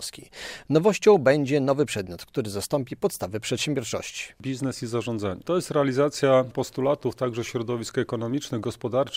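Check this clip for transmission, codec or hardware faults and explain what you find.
No transmission, codec or hardware faults turn up in this clip.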